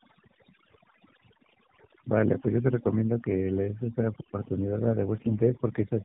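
Throughout, a noise reduction stage was pushed far too hard, an instance of overdone noise removal. Any frequency band that came close to its noise estimate was pulled down or shut off entirely, taking the softer parts of the speech along with it. Between phrases the background drops and breaks up into small twinkling specks.

The whole clip has also passed through the AMR narrowband mobile codec, the AMR-NB speech coder used on 2G and 3G calls. It rebuilds speech from a vocal-tract model fed by a handful of pulses in each 5 ms slice of a 20 ms frame, and at 8 kHz sampling nothing above 4 kHz survives. The damage is plainly audible: the voice is boxed in and muffled at the top and has a buzzy, synthetic edge, which fits a low mode around 7.4 kbps.

At 1.44 to 1.54 s come AMR bit errors. On a weak link, the less protected bits of several frames arrived flipped while the checksum on the core bits still passed, so the excitation pulses landed in the wrong spots and the fine gain, pitch and spectral values were thrown off. 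The level and rough pitch hold, but the voice turns briefly hoarse and scratchy. The error rate there is a few percent, and the burst lasts only around half a dozen frames.

The same fault returns more heavily from 5.16 to 5.39 s. This time the error rate is higher and the corruption spans a longer run of frames. The result is a gargly, rasping stretch of about a quarter second before the speech settles back to the codec's usual buzzy sound.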